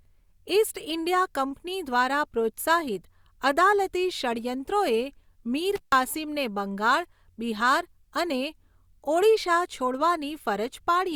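At 5.76 s an intermittent contact briefly opens, as a loose cable or plug loses connection for about 140 ms before reseating at 5.95 s. The speech drops out abruptly, with crackle at both edges of the gap and faint hiss left while the line is open.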